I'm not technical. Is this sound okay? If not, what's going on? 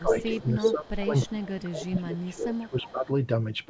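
No. From the start to about 3.09 s, the voice keeps dipping, dulling or dropping out in pieces, for roughly two seconds in total, sometimes almost vanishing. This is speech suppressed in double talk. Both people were likely talking at once, and the call's echo canceller couldn't tell this voice apart from the other side's loudspeaker sound, so it turned everything down together.

There's also a second copy of the voice arriving about a third of a second late. This is an echo leak. It's as loud as the real voice from 0.19 to 0.71 s, quieter from 1.47 to 2.35 s, faint from 2.54 to 2.91 s, and barely there at 0.89 to 0.93 s. One side is likely using a speakerphone whose echo canceller didn't fully remove what its microphone picked up, so part of the sound was sent back.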